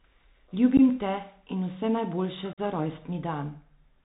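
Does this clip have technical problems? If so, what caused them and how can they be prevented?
Yes. The whole clip carries the sound of a Bluetooth CVSD headset codec. Nothing above 4 kHz comes through, so the speech is dull and narrow. The codec sends one bit per sample, up or down, with an adapting step. Loud, bright sounds outrun that step and distort. S sounds turn scratchy, and a grainy hiss sits under everything. The damage is plainly audible and fits a 64 kbps CVSD link. To prevent it, use a wideband headset codec such as mSBC, or a wired microphone.

There is also unconcealed Bluetooth headset packet loss. The first gap runs from 0.77 to 0.80 s, just before "te in". It loses about 15 ms, roughly a couple of packets. The second runs from 2.53 to 2.60 s and loses about 45 ms, several packets. The missing audio was not patched over. Each gap has abrupt edges, and the speech returns briefly quieter. 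To prevent it, keep the headset close to the phone, away from interference and competing wireless traffic.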